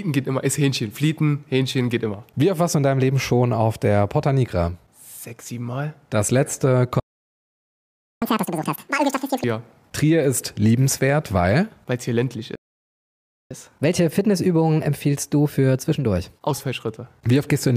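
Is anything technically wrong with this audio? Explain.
Yes. The speech halts twice in playback stalls, from 7.00 to 8.22 s and from 12.55 to 13.51 s. That is silence of about 1.2 s and then 0.95 s, likely from the player running short of data. Unlike a dropout, it resumes where it stopped.

Each stall is followed by catch-up at higher speed. The speech plays at double speed from 8.22 to 9.44 s, with the pitch up by nearly an octave. It then plays 1.1 times faster from 13.51 to 16.51 s, roughly a semitone and a half higher. This comes from resampling, so speed and pitch rise together, which a pitch-preserving time-stretch would avoid.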